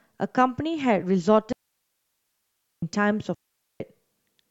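A clean hole of near silence opens in the speech from 1.52 to 2.82 s, lasting 1.3 s, and a second from 3.34 to 3.80 s, about 0.46 s, with no noise burst on either side. These are digital wireless dropouts: the receiver lost too much data and muted with a very short fade.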